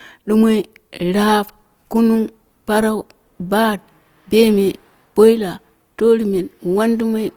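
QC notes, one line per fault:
Throughout: Opus compression, likely at a low rate, something like 24 kbps in its CELT music mode. Starved bands get filled with folded or noise-like energy rather than left empty, so the speech sounds plainly grainy and rough, not swirly, with the top still reaching about 20.2 kHz.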